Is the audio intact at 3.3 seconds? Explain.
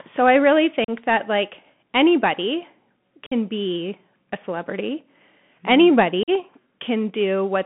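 No. Between 3.26 and 3.33 s, after "that like anybody" and before "be a celebrity", there is unconcealed Bluetooth headset packet loss. About 52 ms of voice data, around seven short packets, never arrived between headset and phone, and nothing was substituted to cover the gap. The sound cuts out abruptly and returns with a brief dip in level. A waveform shows a flat hole with hard edges, and a spectrogram shows a blank vertical stripe across the voice band.

The Bluetooth CVSD headset codec is also present here, as it is throughout the clip. The 64 kbps one-bit delta modulation confines the sound to about 150 Hz to 3.4 kHz. Its adaptive step falls behind on fast transients, which makes sibilants scratchy and leaves a grainy hiss underneath. A spectrogram shows nothing above roughly 3.4 kHz and a speckled noise floor between the harmonics.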